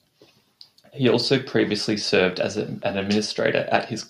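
Speech with a regular train of clicks from 1.13 s to 4.04 s, around fifteen at 4.1 per second, peaking near signal level, likely interference or a faulty connection.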